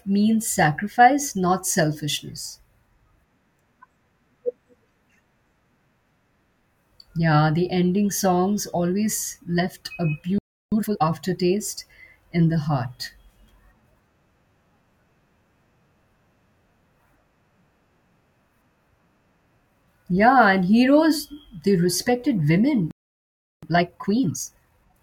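At 10.38 s the speech cuts out mid-flow and stays silent until 10.72 s, a gap of about 0.34 s. This is a playback stall, most likely the player running short of buffered data or its output thread being blocked. From 10.72 s to 11.04 s the speech returns hurried at 2x, with pitch unchanged. That is time-compressed catch-up: the player removes small slices of the backlog and cross-fades the joins to get back on schedule.

The same pair happens again later. Just after "and heroes they respected" the output goes silent at 22.91 s and stays so until 23.63 s, a stall of about 0.72 s. Catch-up then runs from 23.63 s to 24.95 s at 1.5x. Because this stretch is longer and less compressed, the rushed pacing lasts longer but is milder.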